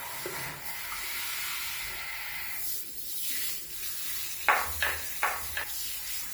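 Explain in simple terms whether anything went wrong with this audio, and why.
A doubled audio track runs from 3.42 to 5.64 seconds. Each sound is followed about 0.7 seconds later by a noticeably quieter, identical copy that starts and stops abruptly, with no fading echo. The likely cause is the audio being captured twice, once through a slower path.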